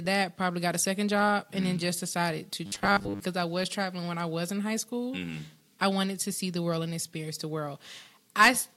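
Robotic sound from repeated short buffers runs from 2.66 to 3.2 s. The speech collapses into a rigid, metallic buzz at a fixed 100 Hz that still roughly tracks the words. The likely cause is audio arriving too slowly, so that a roughly 10 ms fragment is replayed over and over to fill the gaps while the real signal is skipped. Most of that half-second is covered by these repeats.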